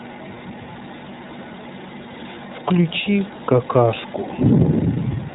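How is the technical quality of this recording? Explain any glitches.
The recording has plainly audible codec damage from start to finish, while the room noise stays about 34 dB below the speech.

Throughout, the speech has passed through the iLBC codec. It codes each frame's excitation on its own, with no help from the frame before, and the texture fits 30 ms frames at roughly 13 kbps. The result sounds rough and slightly synthetic. A spectrogram would show a hard ceiling at 4 kHz with nothing above it.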